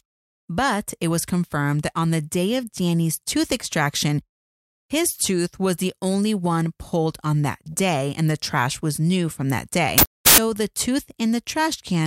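A wrong sample width fault runs from 9.98 to 10.38 s. The speech collapses into loud noise with the voice buried in it, sped up 1.33 times and raised in pitch. This fits packed 24-bit samples being read as 32-bit, so most values mix bytes from neighbouring samples.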